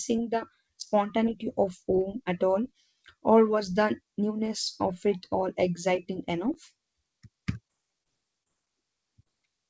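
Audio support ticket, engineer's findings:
Brief smears and wobbles at 7.68, 8.03, 8.43–8.51 (two consecutive gaps) and 9.23 s. Short concealed packet loss: about 20 ms lost each time, bridged by extending the preceding sound, then crossfaded back. Call path bandlimited at 8 kHz, consistent with wideband G.722.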